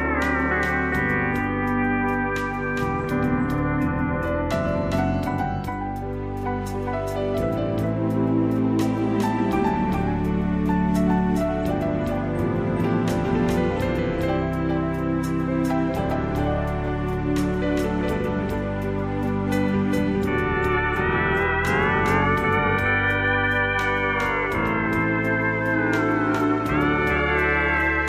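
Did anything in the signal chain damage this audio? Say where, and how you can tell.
Yes: a doubled audio track throughout, likely from a second, slower capture path. A full-band copy at about equal level trails roughly 0.4 s behind, with no decay.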